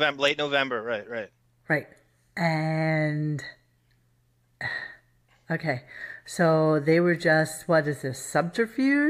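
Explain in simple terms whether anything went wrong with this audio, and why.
Nothing went wrong with this speech recording, and no technical fault can be heard anywhere in it. The sound carries on steadily, with no interruptions or sudden jumps at any point.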